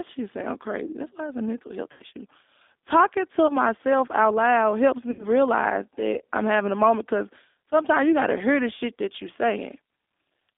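G.729 coding runs through the whole recording. The speech is rebuilt from a vocal tract filter, a pitch predictor and a few pulses per frame rather than the actual waveform, which fits an 8 kbit/s G.729A stream. The line passes only about 200 Hz to 3.6 kHz, so the sound is thin and muffled, and the coding damage is plainly audible as a rough, slightly synthetic texture on every syllable.

VoIP packet loss concealed by the speech codec first appears from 1.92 to 2.03 s, right after "it's a mental health". About 80 ms of audio went missing, which fits four lost packets. The decoder filled the gap by extending its last pitch and filter settings while lowering the gain, so the sound is stretched and fades out. A shorter loss of about 20 ms, consistent with a single packet, follows from 3.47 to 3.53 s, just before "out loud helps". Another 80 ms gap runs from 5.11 to 5.26 s, directly after "out loud helps". 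Because each frame is built from the previous one, the sound stays weak and distorted for a moment after real packets resume, which is why each disturbance lasts longer than the missing audio.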